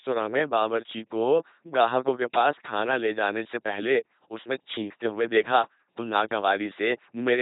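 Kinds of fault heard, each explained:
LPC-10 vocoder: the speech was squeezed through a 2.4 kbit/s LPC-10 vocoder. Each moment is rebuilt from a short all-pole filter, fed either a pulse train or noise. The damage is heavy, giving a buzzing, mechanical robot voice, and nothing is left above 3.8 kHz.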